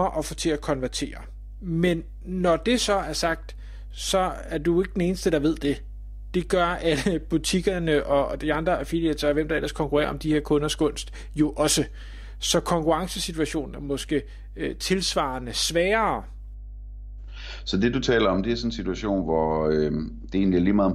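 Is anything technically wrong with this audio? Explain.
Yes, there's mains hum running under the speech for the whole clip. It's a steady low tone at 50 Hz with a few low harmonics stacked on top, sitting roughly 15 dB below the speech. That's the power line leaking into the signal, most likely through a ground loop between connected gear or a transformer sitting too close to a cable or input.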